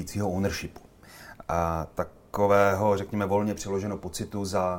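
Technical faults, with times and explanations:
No technical faults can be heard anywhere here.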